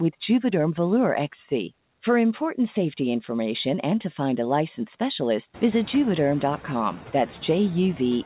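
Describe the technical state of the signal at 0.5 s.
Noise suppressor artifacts are present at 0.5 s and throughout the clip. The suppressor pulls down the bands it judges to be steady noise, by about 10 dB, frame by frame. The leftover noise dips between words and swells beneath the speech.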